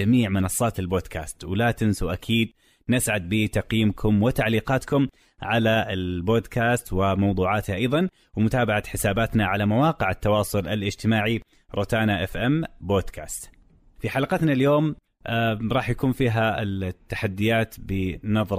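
Speech recording with no audible technical faults anywhere.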